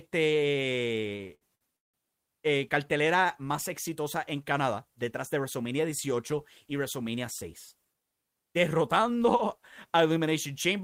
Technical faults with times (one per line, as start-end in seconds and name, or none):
1.01-1.96 repeated stalls (stutter)